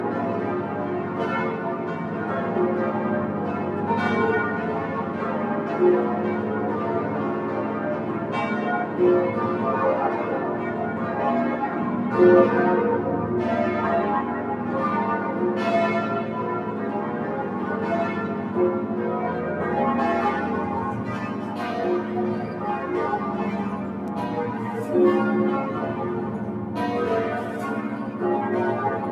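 A noise suppressor, built for speech, stays active across the whole of the roughly 29-second clip of non-speech audio. It treats sustained tones, ambience and reverberant decay as unwanted noise and pulls them down, while transients mostly pass. Level on held material therefore rises and falls with a swing of around 5 dB as the suppressor engages and releases, so the sound pumps, flutters or thins out as tails drop away.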